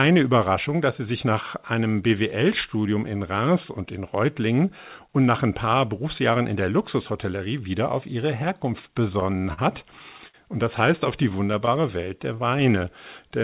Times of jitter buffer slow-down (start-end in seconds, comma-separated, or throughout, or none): 11.81-12.67